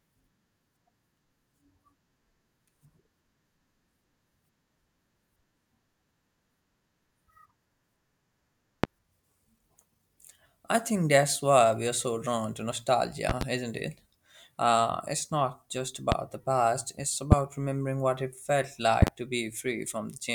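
Speech, with five loud pops landing on top of it at 8.84–8.87, 13.29–13.44 (a double), 16.12–16.15, 17.32–17.35 and 19.02–19.10 s (another double). The strongest sit way above the speech level. Likely a voltage spike from a plug, switch or static discharge.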